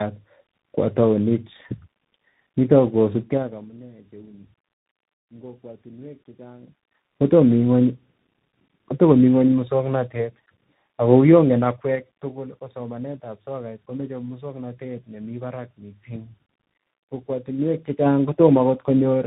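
Tandem speech coding affects the whole clip. The speech passed through two speech coders in a row, and the second re-coded the first's damaged output. It sounds rough, warbly and muffled. Nothing remains above 3.8 kHz. The grain suggests G.729A followed by CVSD.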